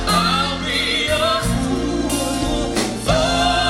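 No technical faults can be heard anywhere in this clip.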